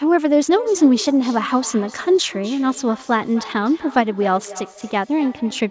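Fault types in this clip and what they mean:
Feedback echo between two devices: a nearby second device replays the call into a microphone whose echo canceller only removes its own playback. From 0.49 s onward, the speech returns roughly every third of a second, about 19 dB below the direct sound.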